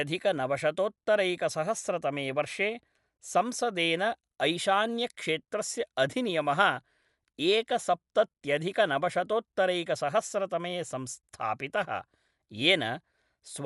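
It's a speech recording with Dolby Digital compression audible from start to finish: nothing above 11.4 kHz, so it sounds dull, with rough, fluttery noise clinging to tones. That's likely an AC-3 encode starved of bits, which fits something around 64 kbps.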